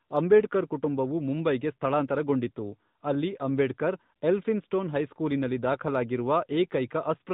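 Throughout, the speech sounds boxy and plainly buzzy with nothing above 4 kHz, the mark of an AMR narrowband mobile codec, plausibly around 10 kbps.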